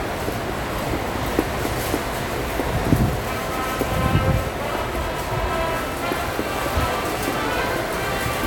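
Four sharp, isolated clicks land at 3.35, 4.29, 6.61 and 7.82 seconds, each a single tick that would show as a thin vertical line across the spectrum. The likely cause is dropped samples: a fraction of a millisecond of the stream goes missing each time, so the waveform leaps straight from one value to a later one. The gap is far too brief to remove any audible sound; only the abrupt step is heard.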